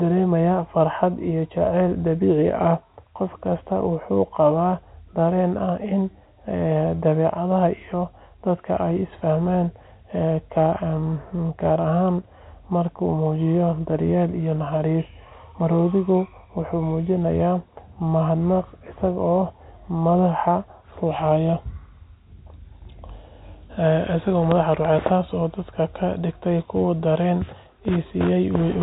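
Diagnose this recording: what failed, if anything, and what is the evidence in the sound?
Nothing stood out on listening: the speech has the narrow band of G.711 telephone coding, with nothing above 3.9 kHz, and no stage of the chain gave any sign of failure.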